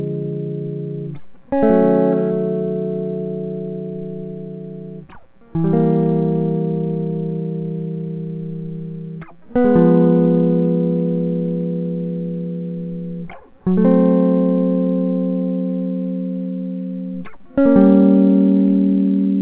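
No technical faults occur in the music, which comes through the call path with nothing above 4 kHz.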